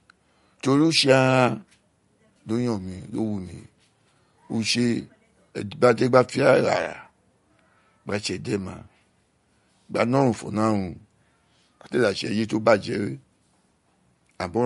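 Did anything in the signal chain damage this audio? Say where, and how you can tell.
Yes, at the codec stage: throughout the speech there is plainly audible MP3 compression, likely at a low bitrate near 49 kbps. A spectrogram shows a hard ceiling at 11.2 kHz, with weak upper bands flickering on and off between frames, which sounds watery and swirly on s sounds.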